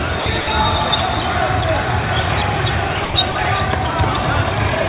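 Sound dropped by the voice detector, at 0.20–0.26 s, 0.41–0.47 s, 3.05–3.14 s and 3.32–3.35 s: the audio briefly gives way to a steady, featureless hiss for 60, 60, 90 and 30 ms respectively, then snaps back. The likely cause is a sender-side detector misjudging these stretches as background, halting transmission so the receiver filled the gaps with comfort noise. All of this sits within a band that stops at 4 kHz, consistent with a narrowband G.711-style call codec.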